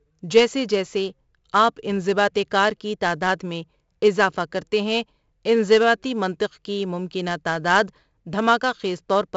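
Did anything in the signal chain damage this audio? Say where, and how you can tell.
Yes, the codec stage: the whole speech clip carries 4-bit ADPCM compression, a gritty hiss riding every loud syllable and roughened consonant attacks where the adaptive step lags. Nothing above 7.7 kHz fits a 16 kHz rate at 64 kbps, dulling the top.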